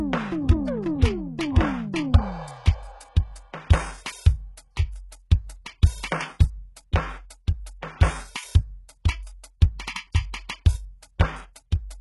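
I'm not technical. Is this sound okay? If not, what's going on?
No. From start to finish the music has the sound of heavy HE-AAC compression, likely cause. Unlike a simply muffled recording, the top end still sounds bright, but cymbals and s sounds sound gritty and metallic, because that treble is faked from lower sounds, and nothing reaches above about 11.5 kHz.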